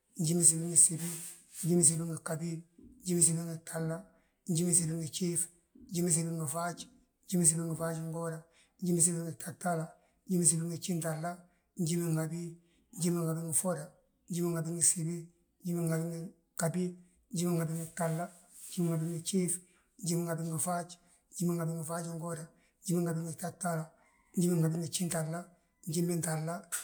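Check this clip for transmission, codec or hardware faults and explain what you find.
Nothing in this speech recording points to a transmission, codec or hardware problem, so there's nothing to flag here.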